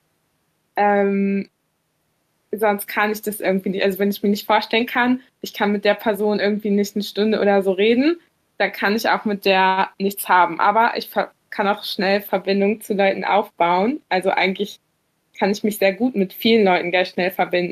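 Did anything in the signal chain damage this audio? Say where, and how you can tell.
No, no damage can be heard.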